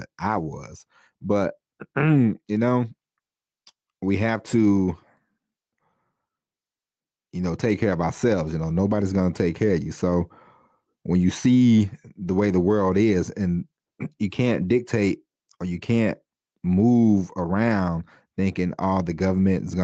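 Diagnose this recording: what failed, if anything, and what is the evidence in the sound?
Gain pumping runs through the whole recording, a level swing of around 10 dB. The likely cause is input gain set far too high at the microphone stage, with a fast limiter or compressor clamping each peak. On a waveform the envelope looks flattened and squashed. A spectrogram shows the noise floor rising between phrases and dipping under loud syllables, beneath an 8 kHz top edge from the call codec.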